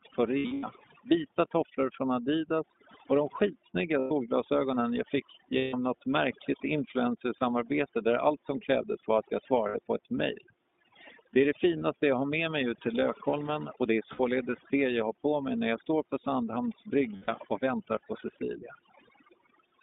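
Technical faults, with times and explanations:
throughout, overdone noise removal: A noise reducer set far too strong cuts bands near its noise estimate, leaving near-silent background with twinkling specks.
throughout, iLBC codec: Narrowband iLBC coding, consistent with its 13.33 kbps mode and 30 ms frames, passes only about 150 Hz to 3.7 kHz, so the speech sounds muffled, a little rough and synthetic.
0.39–0.64, 3.99–4.12, 5.58–5.75, 7.38–7.42, 9.69–9.78, 11.78–11.82, 14.13–14.20 and 17.16–17.29 s, lost iLBC frames: Dropped packets (about 180 ms of losses scattered over the first event, 30 to 150 ms elsewhere) make the decoder repeat the last pitch cycle with noise, giving brief buzzy held vowels, for example right after "de skitsnygga" and between "krävdes var att jag" and "på ett mejl", before speech snaps back.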